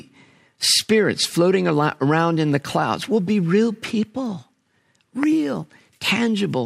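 A sudden voltage step, likely from a plug, switch, static discharge or driver glitch, twice injects a pulse into this speech clip, producing a loud pop each time. The first, from 1.69 to 1.71 s just after "spirits floating", peaks about 10 dB above the speech. The second, from 5.23 to 5.25 s, is stronger at about 15 dB above. Each is a single sharp pop sitting on top of the speech, which carries on underneath.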